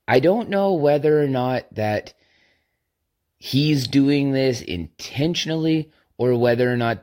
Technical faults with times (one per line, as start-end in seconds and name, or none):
none